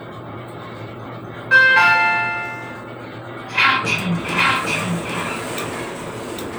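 Everyday sounds. From 4.02 s to the end, a doubled audio track appears: an undecayed copy, about 5 dB quieter, trails roughly 0.7 s behind. A second, slower capture path is the likely cause.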